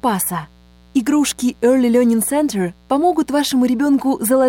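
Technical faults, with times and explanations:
Throughout, mains buzz: switching spikes twice in every 60 Hz cycle add harmonics up to several kHz into the audio, a steady raspy buzz sitting roughly 35 dB below the signal.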